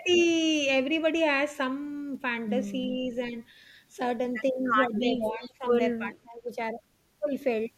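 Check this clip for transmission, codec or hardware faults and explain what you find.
The speech dips in level three times, consistent with speech suppressed in double talk: at 3.3 to 3.35 s (about 5 dB), 5.1 to 5.65 s (about 15 dB) and 5.99 to 6.49 s (about 20 dB). The likely cause is an echo canceller mistaking simultaneous far-end talk for echo and turning the near talker down with it.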